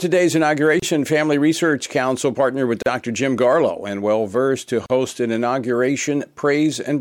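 Short silent dropouts cut into continuous audio at 0.80, 2.82 and 4.86 s, lasting 27, 38 and 38 ms, spaced 2.0 s apart. Each is a gap at a join of encoded pieces: separately encoded segments were joined untrimmed, leaving encoder start delay and final-frame padding as silence.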